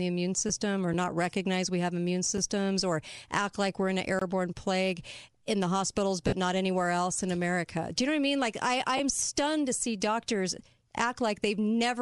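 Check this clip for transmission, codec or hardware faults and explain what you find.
The speech carries three kinds of fault: codec grain throughout, brief concealed frame losses, and hard digital dropouts.

Bluetooth LC3 compression runs through the whole clip, likely at around 48 kbps with 10 ms frames. The upper spectrum is thinned and noise-filled, giving a plainly audible breathy, grainy edge.

Lost LE Audio frames occur at 0.49 s, 6.27–6.33 s (50 ms, about five frames) and 8.97–9.00 s. The decoder repeats the last spectrum with scrambled phase, producing a noisy smear rather than silence.

A block of digital silence appears at 2.37 s (5.8 ms, fitting a 256-sample buffer) and at 4.19–4.21 s (23 ms, fitting 1024 samples). The sound cuts out and back with no fade, unlike the smeared frame losses.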